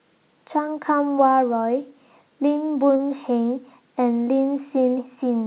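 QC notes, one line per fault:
2.96–3.01 s, short concealed packet loss: a brief smear in the speech, the preceding sound stretched on before blending back, against the call's 4 kHz-limited audio. About 40 ms of packets arrived too late, so the receiver synthesised a continuation to cover the gap.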